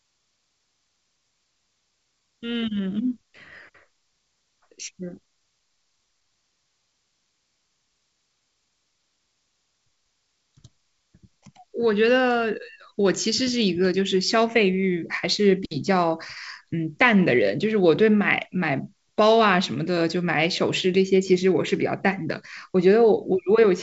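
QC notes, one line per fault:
No faults heard in this speech clip.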